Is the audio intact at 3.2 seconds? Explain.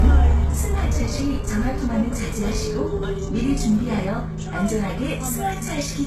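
No. The fault is likely low-bitrate audio saved at a high bitrate, present throughout, so at 3.2 s nothing sounds above 12.4 kHz and the everyday sound is dull and carries the first encoding's artefacts.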